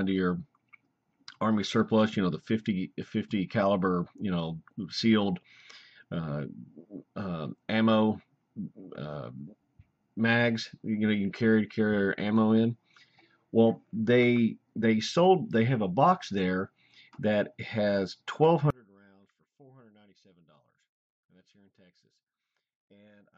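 From 18.70 s to the end at 23.37 s, the sound collapses to a faint remnant about 31 dB lower, the signature of one channel inverted. The likely cause is reversed polarity on one stereo side, so everything common to both channels cancels when they are combined in mono and only their small differences survive. On a waveform the envelope shrinks abruptly to a thin trace; a spectrogram shows the same abrupt drop in energy across the band.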